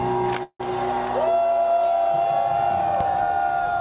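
From 0.43 to 0.61 s there is a call audio freeze: the last sound is held as a fading buzz that drops to about 50 ms of silence, then the audio resumes where it stopped, nothing skipped, running about 165 ms late. Delayed packets likely emptied the jitter buffer.

A single loud pop at 3.01 to 3.04 s rises about 10 dB above the surrounding level as a sharp click-thump, with the band-limited sound, cut off at 4 kHz, continuing underneath. The likely cause is a sudden voltage step from a plug, switch, static or driver glitch.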